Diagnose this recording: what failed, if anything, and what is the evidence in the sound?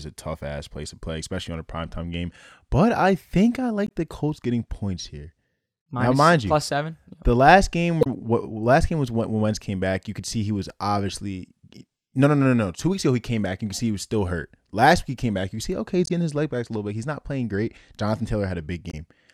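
Damaged data in a compressed stream, at 3.87–3.91 s just after "I think I", 8.01–8.07 s just before "what last game was", 16.06–16.11 s between "see okay he's" and "getting his leg back", and 18.90–18.94 s. Each is a brief disturbance lasting 36 to 60 ms. The failure is at the codec stage: corrupted bytes in the encoded speech make the decoder misread frames, lose sync and resume at the next valid frame header.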